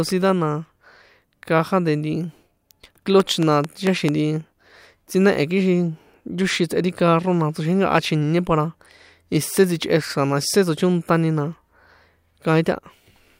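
From 3.20 to 4.10 s, a train of clicks: about five evenly spaced ticks at 4.5 per second, well above the speech, likely from nearby equipment interference.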